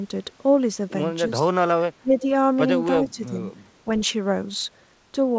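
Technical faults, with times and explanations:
1.41–1.48 s, 2.02–2.28 s and 2.99–3.37 s, speech suppressed in double talk: the speech ducks by up to about 15 dB in the first two spots and about 10 dB in the third. This is likely the echo canceller failing to separate this side's talker from the far end's echo on the loudspeaker and pulling both down. The band stops at 8 kHz throughout, which fits a wideband call codec such as G.722.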